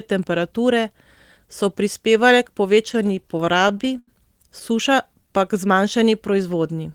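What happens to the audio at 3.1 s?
Right after "so prispevale k" the speech drags and stutters, catching on 17 brief holds between 2.89 and 4.09 s, the longest 83 ms. These are repeated stalls (stutter): late packets kept emptying the jitter buffer, so the last sound was stretched until data resumed.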